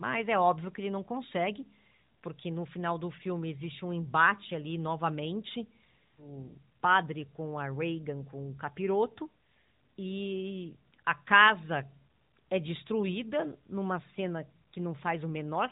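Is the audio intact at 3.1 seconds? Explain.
Yes, at 3.1 seconds the speech is intact, coming through the AMR narrowband mobile codec at 12.2 kbps with its usual band limit of about 3.8 kHz and only light coding colour, and with no dropout, click or other fault at that moment.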